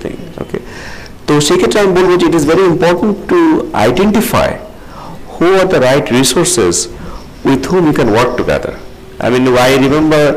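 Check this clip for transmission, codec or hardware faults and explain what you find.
Hard clipping runs the whole clip. The signal is driven about 25 dB past what the stage can pass, flattening close to a third of samples into a harsh fuzz.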